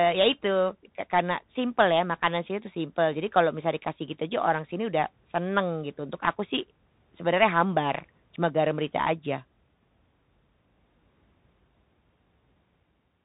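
Throughout, the speech passes through the Bluetooth CVSD headset codec, one adaptive up-or-down bit per sample, fitting a 64 kbps link: nothing above 4 kHz survives, s sounds turn scratchy, and a granular hiss sits underneath. At 3.93 s, a Bluetooth headset packet repeated after one lost packet, about 3.8 ms, and replaying its bits leaves a small tick.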